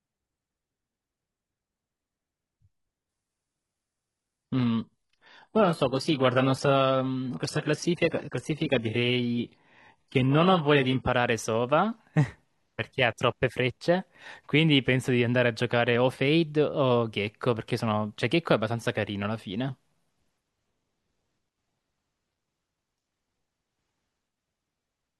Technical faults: adaptive stream at a lower bitrate

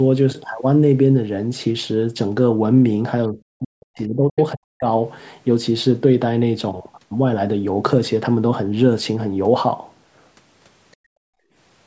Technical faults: other side's voice leaking through; speech suppressed in double talk; background gated by the echo canceller

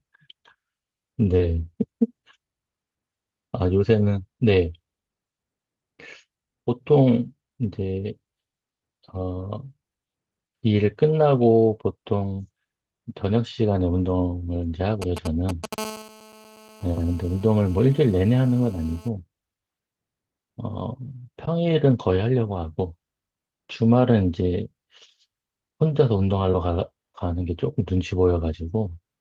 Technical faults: short concealed packet loss; lost packet rebuilt from error correction; GSM signalling bursts; GSM phone buzz

